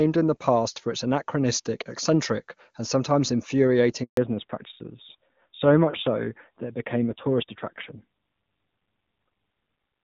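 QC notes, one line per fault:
4.03–4.17 s, handover gap: the sound decays within a few tens of milliseconds and stays silent for about 140 ms before the new link picks up. No speech frames arrived while the call was being passed between networks, so whatever fell in that window is gone, not muffled. On the waveform it is a flat, near-zero stretch with an abrupt start and end. On the spectrogram it is a clean vertical band of empty energy across all frequencies.
4.17 s to end, fallback to narrowband: right after the gap, everything above 4 kHz disappears and the speech turns duller and rougher. The call left HD Voice, which before 4.03 s sounds clear and full at a high wideband rate, and dropped to an older narrowband codec. The raspier texture fits AMR-NB at around 7.4 kbit/s. On the spectrogram the upper band is clean up to the gap, then becomes a hard ceiling at 4 kHz with nothing above it.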